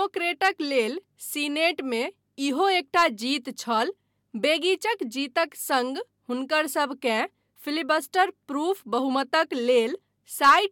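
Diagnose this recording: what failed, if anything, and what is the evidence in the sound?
Nothing in the signal chain has failed: the speech signal is continuous and stable, with no dropouts, level jumps, added noise or distortion to point at any stage.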